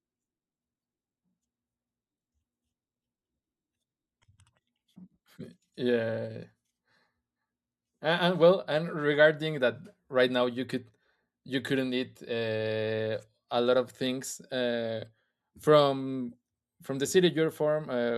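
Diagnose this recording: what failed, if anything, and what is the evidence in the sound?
Nothing failed: across the whole speech recording, no stage from capture through to playback leaves any audible evidence of a fault.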